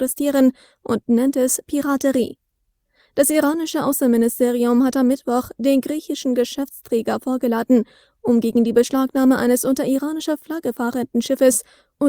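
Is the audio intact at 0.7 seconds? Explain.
Yes, the audio is intact at 0.7 s, with no fault at that moment.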